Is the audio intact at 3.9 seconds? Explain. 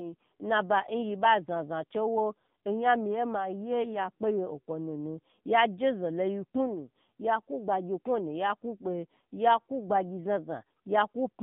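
No. At 3.9 seconds you're hearing the same AMR narrowband mobile codec damage that runs through the whole clip. The speech has gone through a phone-style coder that samples at 8 kHz and rebuilds the voice from a vocal-tract model fed by a few pulses per short frame, so nothing above 4 kHz survives. It sounds muffled and plainly buzzy and synthetic, which fits a low rate around 7.4 kbps.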